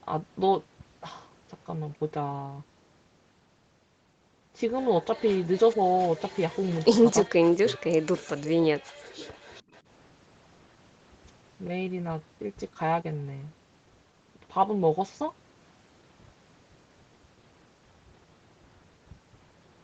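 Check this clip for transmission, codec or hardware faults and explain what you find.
Echo leak is the fault here, in three short bursts: 7.69 to 7.73 s, 8.20 to 8.26 s, and 9.19 to 9.81 s. The likely cause is a far end playing the call through a loudspeaker, where the echo canceller let some of the microphone pickup slip through and sent it back. Each burst is a faint copy of the speech trailing the original by roughly 0.41 s. It is most noticeable at 7.7 s and quieter in the later two, with the longest stretch lasting just over half a second. The audio has no content above 8 kHz, which fits the call path's normal bandwidth.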